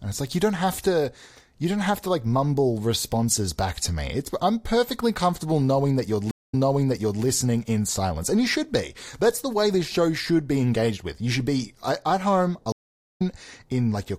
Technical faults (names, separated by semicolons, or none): stream reconnect